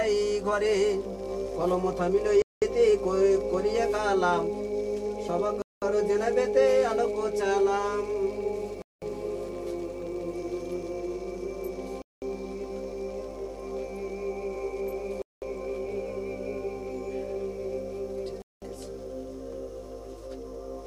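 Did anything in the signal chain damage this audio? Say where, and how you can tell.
Yes. A gap between chunks was introduced at the chunking stage, in transport or playback. Silent holes of 200 ms open at 2.42, 5.62, 8.82, 12.02, 15.22 and 18.42 s. Each has hard edges, and they recur every 3.2 s. That spacing fits 3 s chunks with 0.2 s of dead air after each. The sound resumes exactly where it stopped, so nothing is lost. Each chunk simply starts late, or carries padding.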